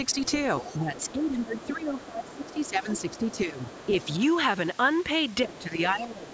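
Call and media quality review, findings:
Other side's voice leaking through: faint second voice about 20 dB under the talker, 0.09–4.23 s, plus a short scrap about 25 dB down at 5.55–5.63 s. Likely residual loudspeaker echo the echo canceller missed.

Speech suppressed in double talk: talker's level drops in pieces by up to about 15 dB, roughly 2 s in total across 0.62–4.08 s and about 0.7 s from 5.45 s to the end. Likely the echo canceller turning down both sides while they overlap.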